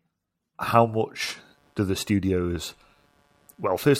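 From 1.21 s to the end, a buzzing, chirping or scratching layer sits under the speech, pulsing around 150 times a second, roughly 40 dB below it. This is computer activity noise: processor, graphics or mouse load disturbing the audio circuit's shared ground.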